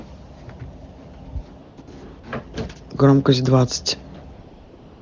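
At 1.61 to 1.77 s, 1.81 to 1.87 s, 2.19 to 2.23 s and from 4.33 s to the end, the real background gives way to a steady, smooth hiss. This is AMR comfort noise: the phone judged these moments silent, stopped sending speech frames, and the receiver generated substitute noise.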